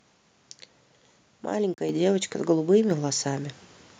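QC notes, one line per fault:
1.74–1.78 s, block of digital silence: the speech drops to silence for 40 ms and returns just as abruptly. The output buffer was likely not filled in time, so nothing was written for that stretch. Unlike a dropout that fades or fills with comfort noise, the gap is silent, and its edges cut in and out with no fade.
1.9 s, microphone volume stepped up: the level rises by about 6 dB in a single jump and stays there. The call software judged the microphone too quiet and raised the device input volume in one step. What separates it from a compressor or gain-control swell is that the speech and the background noise jump together, instantly, with no gradual ramp and no pumping afterwards.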